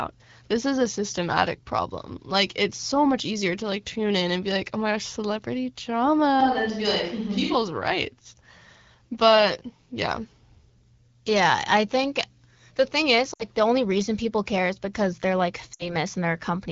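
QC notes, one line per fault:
6.41–7.55 s, switch to a distant microphone: the sound suddenly turns hollow and roomy with thinner bass at little level change, then snaps back, likely because the pickup fell back to a far microphone. The spectrogram shows weaker low end and a raised noise floor about 40 dB below the speech.
13.33–13.44 s and 15.73–15.96 s, lost AMR speech frames: each gap of about 60 ms, which fits three lost frames, is bridged by the wideband decoder repeating its last settings at falling gain. It sounds like a brief dip that drops to near silence within two frames before the sound returns slightly rough. The waveform shows a tapering envelope, and the spectrogram shows blurred, repeated harmonics. The AMR-WB coding at 12.65 kbit/s does only light damage.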